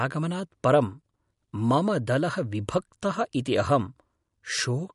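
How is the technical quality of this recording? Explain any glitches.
The technical quality is compromised by audible lossy coding across the whole clip. Throughout, the speech has nothing above about 11.1 kHz and a watery, swirly texture, likely MP3 compression at a low rate, consistent with roughly 48 kbps. Short of bits, the encoder drops the treble and zeroes weak frequency lines that flicker between frames, smearing consonants and attacks.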